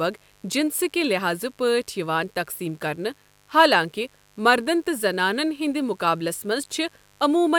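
Mains buzz runs through the entire speech clip: a steady, raspy hum sitting well below the voice, roughly 35 dB down. Sharp switching spikes from a dimmer, rectifier or unshielded cable arrive twice per 50 Hz cycle, spraying harmonics up into the kilohertz range.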